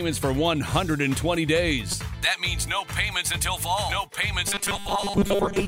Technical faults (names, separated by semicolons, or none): damaged data in a compressed stream; robotic sound from repeated short buffers